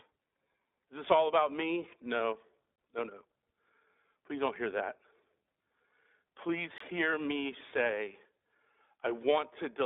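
Throughout, the speech carries plainly audible iLBC codec damage: 20 ms frames at 15.2 kbps, band-limited to about 250 Hz to 3.6 kHz, with a spectrogram empty above 3.8 kHz.

At 2.76 to 2.78 s, just before "no no", and again at 6.78 to 6.80 s, before "hear me say", a gap between chunks of 23 ms interrupts the audio. These dropouts fall 4 s apart. Each shows as a flat line in the waveform and a thin vertical blank stripe on the spectrogram.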